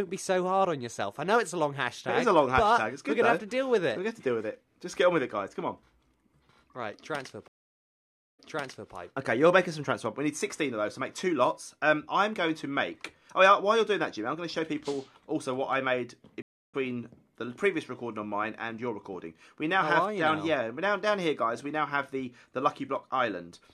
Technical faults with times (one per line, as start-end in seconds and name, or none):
7.48-8.92 stream reconnect
16.42-16.74 stream reconnect